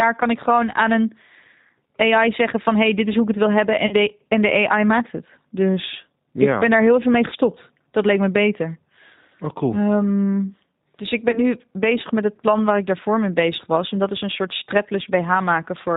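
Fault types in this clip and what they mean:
G.729 codec: The speech was carried by a low-bitrate codec that rebuilds the voice from a vocal tract model, which fits G.729 at 8 kbit/s. Nothing above 4 kHz passes, so the whole clip sounds band-limited, plainly rough and slightly synthetic.
VoIP packet loss concealed by the speech codec: Packets went missing, and the decoder stretched its last pitch and filter with falling gain. This gives short buzzy or noisy, fading patches at 3.87 to 3.94 s (about 40 ms lost), 7.30 to 7.35 s and 11.31 to 11.40 s (about 20 ms each).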